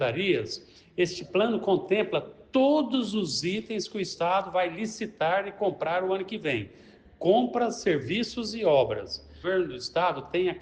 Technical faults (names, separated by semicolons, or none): stream segment skipped